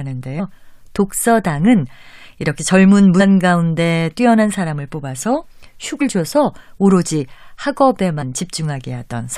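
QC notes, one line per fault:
0.38–0.40 s, 3.19–3.21 s, 6.00 s and 8.21–8.23 s: damaged data in a compressed stream. Brief glitches where the decoder misread corrupted frames and lost sync before catching the next header.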